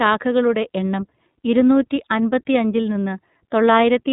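Throughout the speech, the iLBC codec is plainly audible. Nothing above 3.8 kHz survives, so the sound is narrowband and dull. Each 30 ms frame is coded independently, leaving a rough, slightly synthetic edge. This fits iLBC's 13.33 kbps mode.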